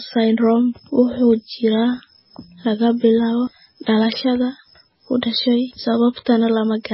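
Speech throughout, with nothing above 5.6 kHz and heavy watery, swirling artefacts, likely from MP3 compression at a very low bitrate, consistent with roughly 16 kbps.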